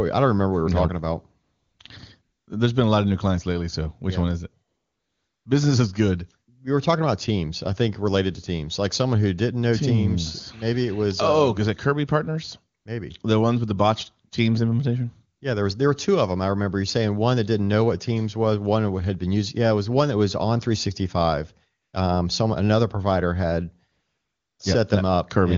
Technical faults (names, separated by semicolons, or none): AMR comfort noise